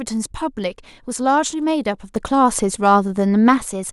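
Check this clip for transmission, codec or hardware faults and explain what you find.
One fault is present, a sudden gain jump. At 2.16 s the level of the speech rises by about 6 dB from one sample to the next, and the background noise rises with it. The raised level holds until 3.58 s, then drops back. Because sound and noise step up together with no fade, the change is likely a digital gain setting or bit shift applied without a ramp, not anything at the source.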